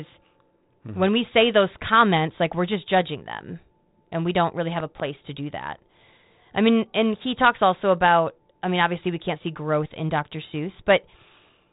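At 4.80 to 5.02 s, between "we don't really have" and "to do that", two sharp loud pops land in quick succession, peaking a little above the speech level, while the speech continues underneath. This is a loud pop fault, likely caused by a brief voltage step or spike entering the line, such as from a connector, switch or static discharge, then shaped by the downstream circuitry. The telephone-band character throughout fits G.726 ADPCM at around 32 kbit/s.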